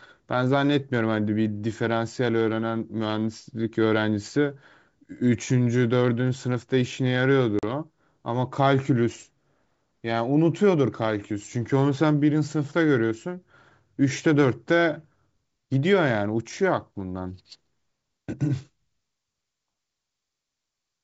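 At 7.59 s the speech drops into a hard-edged hole of silence lasting about 40 ms, ending at 7.64 s. This is packet loss on an ADPCM call, here over G.722 wideband telephone coding: a handful of packets, around four, never arrived and were filled with silence. The decoder's adaptive predictor and step size then no longer match the sender's, so the audio just after the gap has to settle as the decoder re-tracks the signal.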